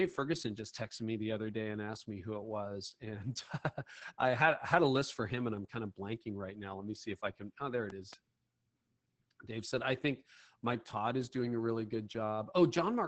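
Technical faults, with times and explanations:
Throughout: Opus voice compression. At about 10 kbps the speech-mode coder cuts the band near 8 kHz and codes coarsely, so speech sounds muffled, hoarse and slightly robotic.
7.90 to 8.15 s: loud pop. Two sharp pops land on the speech, peaking a few decibels above it. A brief voltage spike, likely from a plug or switch, caused this.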